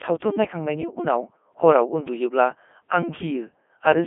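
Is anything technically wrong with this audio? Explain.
Yes, the speech has passed through a very low-rate vocoder.

Codec 2 vocoder, throughout the clip: the voice is rebuilt from pitch, voicing, loudness and a rough spectral shape rather than carried as a waveform. The decoder then resynthesises it from sine waves, so the speech comes out heavily damaged, robotic and buzzy. The band is confined to roughly 200 Hz to 3.4 kHz, and the coarseness fits Codec 2's 3.2 kbit/s mode.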